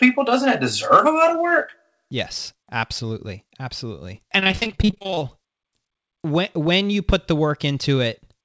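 Right after "absolutely absolutely", from 4.40 to 5.23 s, repeated packet loss (robotic sound) sets in. About twenty short holes, none longer than 34 ms, are patched by stretching the preceding sound, so about half the stretch is synthetic and choppy. On a spectrogram, frozen, smeared slices alternate with real ones, all cut off at 8 kHz by the wideband call path.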